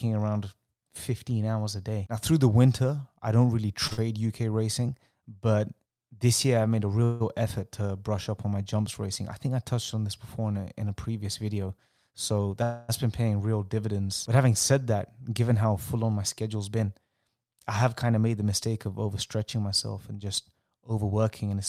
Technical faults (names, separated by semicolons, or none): short stall from a late packet; short concealed packet loss; call audio freeze; jitter buffer speed-up